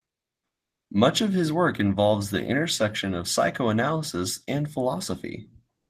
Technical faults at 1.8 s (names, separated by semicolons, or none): none